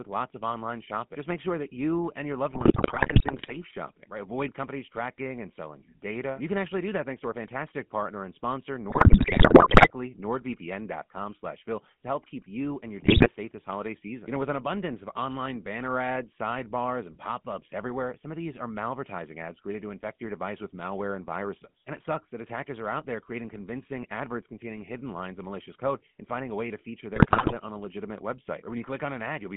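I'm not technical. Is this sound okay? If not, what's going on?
No. The GSM full-rate codec runs throughout: it rebuilds the voice from a rough model of the mouth, leaving it buzzy and gravelly with nothing above 3.5 kHz. GSM bit errors occur at 2.54 to 3.57 s, 8.90 to 9.91 s, 13.00 to 13.28 s and 27.16 to 27.53 s, where corrupted data from a weak phone link makes the voice squawk, pop and gargle.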